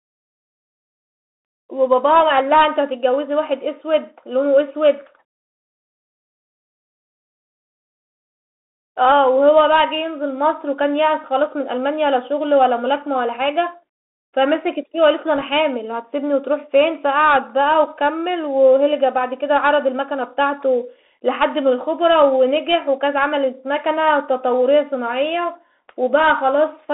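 A speech recording carried through a Bluetooth CVSD headset codec from start to finish. Only about 250 Hz to 3.6 kHz survives, with scratchy sibilants and granular hiss, consistent with a 64 kbps link. At 15.38 to 15.42 s, bit errors on a Bluetooth voice link add a brief rushing crackle without sharp clicks, pointing to roughly one percent errors.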